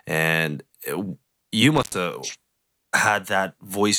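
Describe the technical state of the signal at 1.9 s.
At 1.9 s, intermittent contact (1.76–1.97 s, after "uh you"): a loose connection opens for about 93 ms, leaving faint hiss, seen as a near-flat waveform gap edged by broadband crackle spikes.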